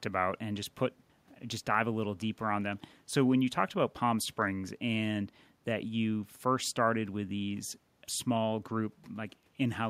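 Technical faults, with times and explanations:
No technical faults detected on the speech recording.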